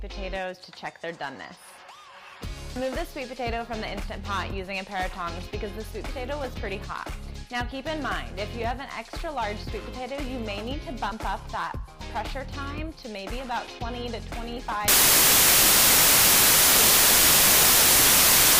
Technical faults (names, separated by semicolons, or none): wrong sample width